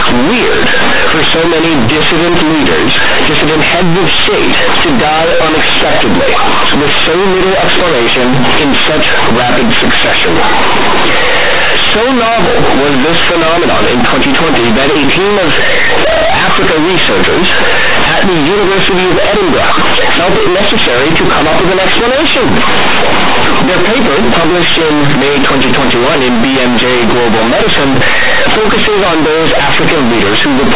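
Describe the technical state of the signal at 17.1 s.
At 17.1 s you're hearing companded audio read as linear, and it runs through the whole clip, not just this moment. The speech was stored as mu-law bytes but is being played back as plain 8-bit linear samples, so the logarithmic scale never gets expanded. Every zero crossing throws the output across about half its range, which flattens quiet and loud parts to the same size. The result is loud, buzzy, mangled speech with heavy noise in the gaps. The 4 kHz telephone band underneath is still there.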